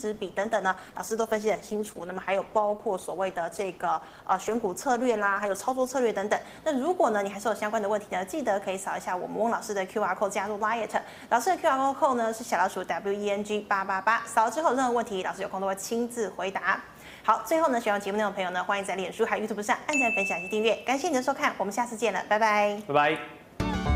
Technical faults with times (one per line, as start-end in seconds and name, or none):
0.00-6.00 adaptive stream starting at a low bitrate